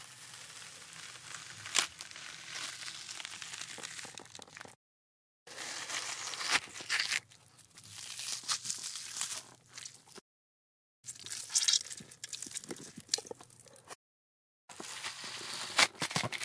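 From start to end, these sounds have a wrong sample rate fault. Everything runs 1.38 times too fast and about 5.5 semitones high, which fits 16 kHz material played at 22 kHz. On a spectrogram, every feature sits higher and is squeezed in time.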